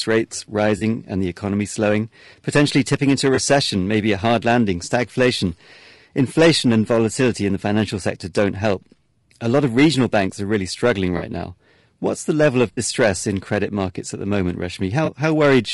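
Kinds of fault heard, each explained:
Low-delay AAC compression: Throughout, the speech sounds plainly rough and grainy, with noise filling the gaps between harmonics and a thin, synthetic top band. This is likely a low-delay AAC coder at a bitrate around 32 kbps, whose short frames resolve pitch poorly.
AAC frame loss with concealment: Brief smeared, noisy patches occur at 0.77–0.83, 3.35–3.39, 11.17–11.23, 12.73–12.79 and 15.05–15.09 s, each lasting 20 or 40 ms. Coded frames went missing, and the decoder covered each gap by reusing the last good spectrum.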